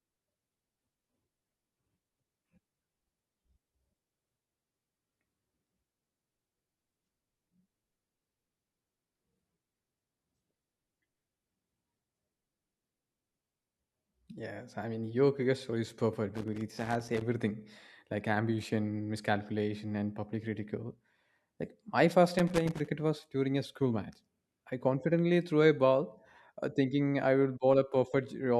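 Loose connector crackle appears at 16.34–17.21 s after "cricket story is perfect" and at 22.39–22.88 s between "my first" and "was during a school": a worn contact intermittently breaking the speech signal into irregular scratching bursts.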